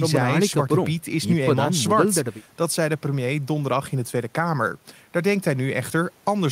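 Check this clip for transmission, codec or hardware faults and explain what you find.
No transmission, codec or hardware fault can be heard in this speech recording. There is nothing to report.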